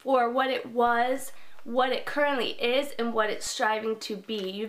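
At 0.87 s the signal's zero line jumps to a fixed offset of about -37 dBFS. This is a DC step, the kind of shift a converter recalibrating or an input with its own offset being switched into the path would cause. The offset holds until 3.47 s, when the baseline steps back. Each jump is heard as a low thump or click, one at each end, while the sound on top carries on unchanged.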